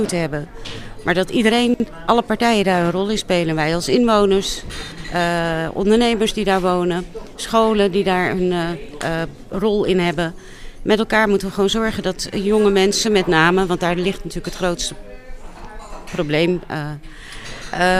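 At 1.74 to 1.86 s and 4.92 to 5.04 s, chunks play out of order. A 60 ms block lands one chunk late, giving a jumbled swap.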